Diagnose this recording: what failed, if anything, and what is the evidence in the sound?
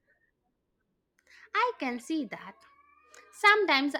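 Nothing failed in this speech recording, and no stage between capture and playback leaves any audible trace of a fault. The sound gives no evidence that points to a problem anywhere in the chain, so there is nothing to diagnose.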